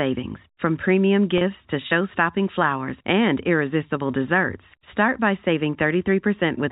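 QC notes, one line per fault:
1.38–1.41 s, packet loss with pitch repetition: the speech briefly holds with a slightly buzzy sustain for about 30 ms, consistent with a single lost packet. The receiver filled the gap by repeating the last pitch period instead of leaving silence.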